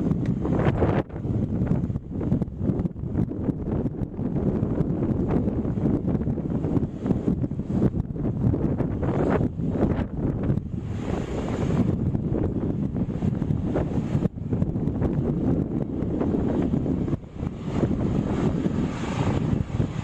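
At 1.09 s, 6.29 s and 14.72 s, compressed frames are skipped. Whole 26.1 ms frames never play, so the sound jumps ahead by about 150, 100 and 50 ms. Overlapping neighbour frames turn each join into a short smeared blip, not a click.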